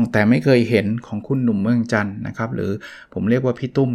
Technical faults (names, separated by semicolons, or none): none